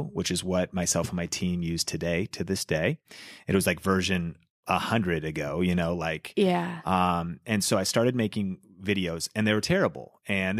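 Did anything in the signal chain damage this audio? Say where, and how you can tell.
No, nothing in the chain did.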